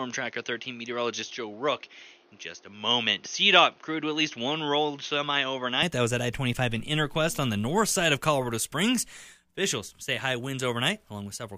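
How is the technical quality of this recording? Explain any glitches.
The speech has one clear glitch: for the first 5.83 s it sounds duller and slightly boxy, with faint extra background noise, then opens up to full clarity. The likely cause is an input switched to a poorer device, whose narrower band cuts everything above about 6.5 kHz and adds its own noise roughly 35 dB below the speech. The level stays the same and there is no gap at the changeover.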